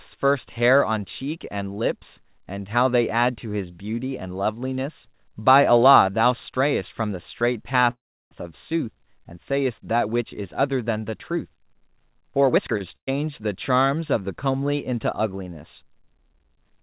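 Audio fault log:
7.90–8.33 s, call audio freeze: The incoming packets were likely held up in transit, so the jitter buffer emptied and the receiver had nothing new to play. It continued the last sound briefly, and then about 0.33 s of the roughly 0.41 s gap is silence. When the packets arrived the audio resumed exactly where it had stopped, so nothing is lost, but a pause has been inserted and everything after it runs about 0.41 s later.
12.48–12.77 s, jitter buffer speed-up: The jitter buffer had built up more audio than its target, so the receiver trimmed repeated pitch-period-sized pieces to catch up, removing around a fifth of a second in total. Over this stretch the speech plays at about 163% of normal speed while keeping its pitch, so it sounds rushed and clipped rather than higher, before settling back to normal pace.
12.77–12.82 s, short stall from a late packet: Right after the catch-up, one packet was not there when it was due and the buffer briefly ran dry. 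The receiver stretched the current sound by about 29 ms until the packet turned up, then carried on from the same point. No speech is missing, but one sound is held a touch too long, with a faint buzz or dip where the extension sits.
12.96–13.09 s, burst of packet loss: A short run of packets never arrived in time, so about 120 ms of speech is gone. The receiver filled the hole by extending the preceding sound and fading it, with about 100 ms of the 113 ms fill effectively silent, so there is a quick buzz or hiss dropping away. The audio then picks up further along, with the part in between skipped.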